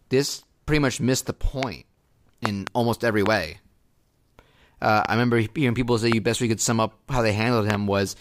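Speech, interrupted by eight loud pops that sit well above the voice level while the speech carries on underneath. Single pops occur at 1.63–1.65 s after "pretty much missed the", 3.26–3.28 s after "almost every", 5.05–5.07 s, and 6.12–6.14 s between "hearing people say" and "best we could sum". Double pops come at 2.46–2.69 s and 7.70–7.77 s. Each is a sharp electrical transient, likely from a plug, switch, static discharge or driver glitch.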